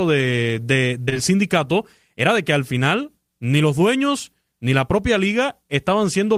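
Short concealed packet loss at 1.05, 1.09 and 1.14 s, between "de de" and "sindicato era de que": three back-to-back gaps of about 20 ms each went undelivered, and the receiver patched them by extending the preceding sound, leaving a brief smeared wobble.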